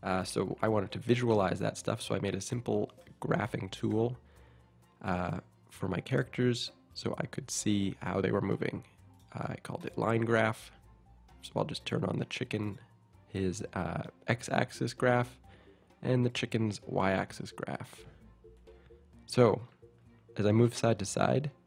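Nothing in the recording stood out as a problem when listening to it.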